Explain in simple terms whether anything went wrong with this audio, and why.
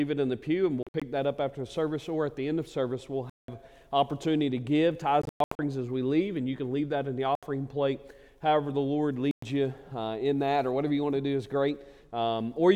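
The sound cuts out briefly at 0.83–1.02, 3.30–3.48, 5.22–5.59, 7.35–7.43 and 9.31–9.43 seconds. These are likely Bluetooth dropouts, where data failed to reach the headphones in time. Unlike a pause, the sound resumes further along, so that bit is skipped.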